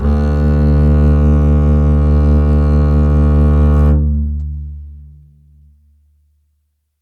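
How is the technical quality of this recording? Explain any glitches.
No glitches or technical faults can be heard in this music recording. It contains no dropouts, clicks, distortion or other audible errors.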